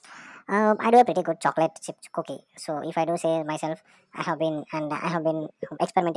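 From start to finish the speech plays too fast and too high, the mark of a wrong sample rate. Audio recorded at 16 kHz is played at 24 kHz, so everything runs 1.5 times faster and about 7 semitones higher. A spectrogram shows harmonics and formants stretched upward and the waveform squeezed in time.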